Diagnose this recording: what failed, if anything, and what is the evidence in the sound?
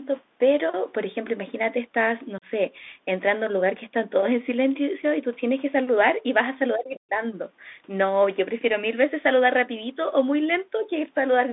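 The codec stage ran a Bluetooth CVSD headset codec, and the sound points to 64 kbps CVSD: speech confined to 200 Hz–3.6 kHz, with scratchy sibilants and granular hiss.

At 2.38–2.45 s, unconcealed Bluetooth headset packet loss on the wireless link leaves an abrupt 37.5 ms hole, which fits about five lost packets, with no concealment filling the gap.

From 6.75 to 7.23 s the speech drops by around 40 dB. This is likely speech suppressed in double talk, where the call processing's echo canceller attenuated the talker during overlap.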